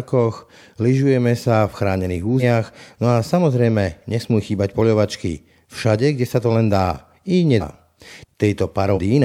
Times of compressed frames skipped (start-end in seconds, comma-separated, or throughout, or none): 2.39-2.43, 7.59-7.62, 8.94-8.99